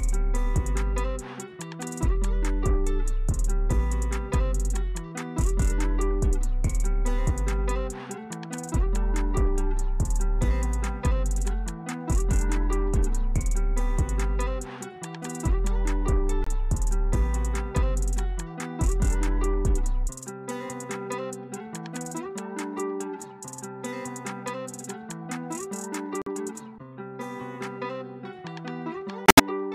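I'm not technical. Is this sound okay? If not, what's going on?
No, not quite. There are three short dropouts called corrupt frame muted. Some of the compressed data got damaged, the player couldn't decode those chunks, and it played silence instead. You hear the sound cut out abruptly at 16.44 to 16.48 s, at 26.22 to 26.28 s, and longest at 29.26 to 29.40 s, which points to several chunks lost in a row. Timing stays intact, so nothing drifts afterward.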